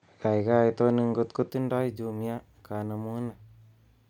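From 0 to 1.5 s the speech is dull and capped at 8.7 kHz, a few dB off in level with faint extra noise. Likely the input switched to a poorer device.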